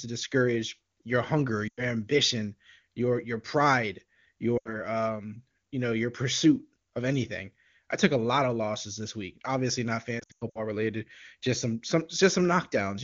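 Lost AMR speech frames occur at 1.68 to 1.89 s, 4.57 to 4.78 s, and as scattered losses from 10.19 to 10.60 s. Radio errors corrupted frames, so the decoder repeated the last good pitch and vocal tract settings at falling gain. The longer runs of lost frames drop the sound to near silence within two frames before it returns weak. Unlike a clean dropout or a click, the sound decays instead of cutting off.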